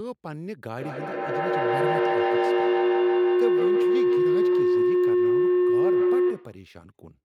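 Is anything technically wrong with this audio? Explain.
Yes. From 0.75 s to 6.7 s the speech is hit by feedback howl. Two devices in the same room on one call form a microphone-to-loudspeaker loop that adds level on every trip. The repeats, coming roughly every 150 ms, build up instead of dying away and narrow to a tone near 400 Hz. At its peak the howl is about 12 dB above the speech. A spectrogram shows a bright horizontal band near 400 Hz, and the waveform's envelope swells over that span.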